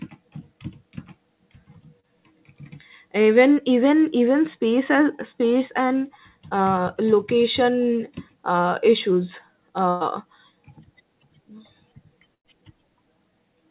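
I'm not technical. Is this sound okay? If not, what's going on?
No, there are a few small glitches, typical of a phone or internet call. The call path's usual muffled, phone-like sound, with nothing above 4 kHz, is separate from them.

At 2.00–2.05 s and 6.49–6.53 s you'll hear short concealed packet loss. Tiny bits of audio, about 40 ms and 20 ms, arrived too late. The receiver patched each hole by stretching the sound just before it, so you get a quick smear or wobble.

At 9.89–10.02 s and 12.34–12.46 s there's a burst of packet loss, a bigger chunk of about 120 ms and then 100 ms. The gap gets filled with a held, fading version of the previous sound, and then the audio jumps ahead with that stretch missing.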